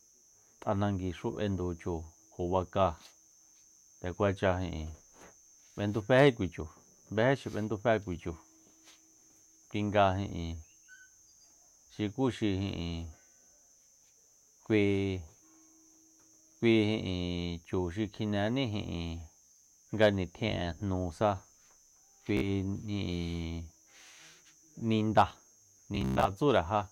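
Bluetooth stutter hits the speech at 19.45 to 19.66 s, 22.37 to 22.46 s and 25.95 to 26.30 s. Late or lost packets leave the receiver replaying its last short slice, so each gap buzzes rather than falls silent like a dropout. The speech then resumes further on, with nothing delayed.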